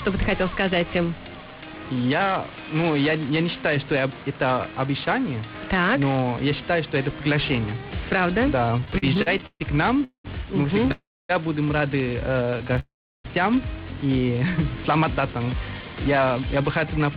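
From 8.77 to 9.62 s there's a run of repeated stalls, a proper stutter. Packets were showing up late, so the jitter buffer kept running dry, twelve times in that stretch. Each time the receiver just stretched out the last bit of sound until more arrived, the longest hold being 137 ms. About a third of that span is filler, nothing's actually lost, but it drags and hiccups along.

Then come three call audio freezes: 10.04 to 10.26 s, 10.92 to 11.31 s, and 12.79 to 13.26 s. Each one sounds like the audio hangs on a fading buzz and then drops to silence before picking up exactly where it stopped. They run 204, 377 and 448 ms, with the silent tail growing from 100 to 260 to 340 ms. The likely cause is packets getting held up in transit long enough to empty the buffer, so a gap gets inserted and nothing is skipped.

Just before that last freeze, 12.5 to 12.79 s has a lighter second bout of repeated stalls. 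There are six tiny gaps, none over 16 ms, covering about a fifth of the span, so it's more of a flutter than a lurch.

Last, from 15.22 s to 17.01 s there's a jitter buffer speed-up. After all that delay piled up, the receiver trimmed little pitch-period-sized slices over and over, roughly a tenth of a second in total. Playback runs at about 105% with pitch unchanged, so it comes across as slightly hurried.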